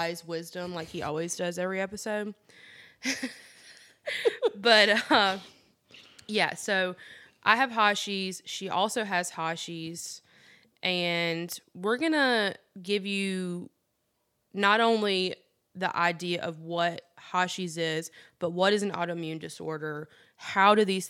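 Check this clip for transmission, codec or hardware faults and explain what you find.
Listening through the whole recording, I find nothing that points to a fault. There is nothing in the speech that calls for an explanation.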